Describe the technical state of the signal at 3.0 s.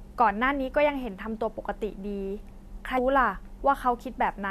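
Just before that point, at 2.97 s, there is a brief blip caused by damaged data in the compressed stream. Corrupted bytes there made the decoder misread those frames and lose sync, so it briefly produced garbage while searching for the next valid frame header.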